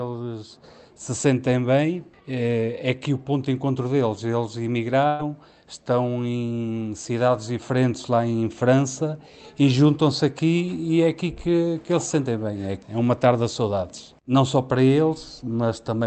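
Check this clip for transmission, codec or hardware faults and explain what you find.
One transmission fault stands out, a single burst of packet loss.

Burst of packet loss, 5.07 to 5.21 s: several consecutive packets never arrived in time, so the receiver stretched and faded the last sound for roughly 115 ms. Playback then resumes about 120 ms further on, with that stretch of audio simply gone.

The call codec's top end stops at 8 kHz, consistent with Opus at around 32 kbps.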